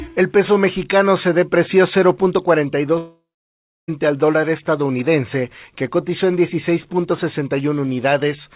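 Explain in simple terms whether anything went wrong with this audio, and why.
A long network dropout hits from about 2.98 to 3.90 s. The sound stops arriving partway through, and the receiver keeps the last bit of audio going as a fading buzz for a short moment. Then about 0.65 s of near silence follows before the audio picks up again, with almost a second of material simply gone. This is most likely a network break that starved the call of audio. Throughout, the sound is capped at 4 kHz, which fits a standard phone codec on the call path.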